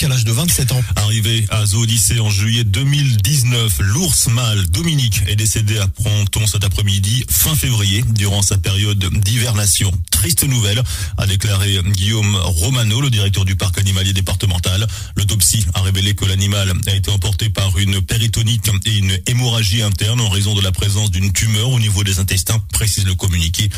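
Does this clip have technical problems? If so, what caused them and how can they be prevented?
Yes. A chirp at 5.26 s and a much louder blip at 9.75 s are each a corrupt frame decoded: flipped bits in one compressed frame made the decoder put energy at the wrong frequencies. Checksums with concealment of failed frames prevent this.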